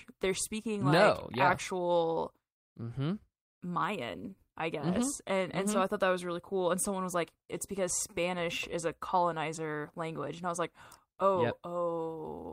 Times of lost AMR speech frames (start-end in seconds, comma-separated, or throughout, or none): none